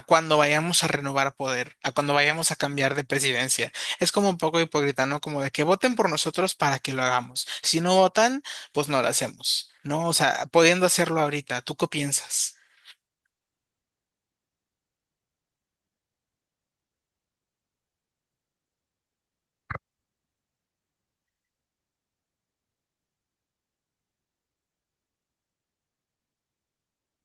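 No faults are audible in this speech, which comes through Opus voice compression in hybrid mode at about 24 kbps with full bandwidth retained.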